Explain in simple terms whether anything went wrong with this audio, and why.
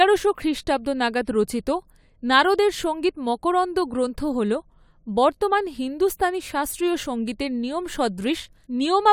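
Sample clock jitter: from 5.81 s to the end, the timing clock that samples the sound wobbled by roughly a microsecond, so each sample was taken slightly early or late. That adds a faint hiss or roughness riding on the speech, strongest on loud, sharp sounds.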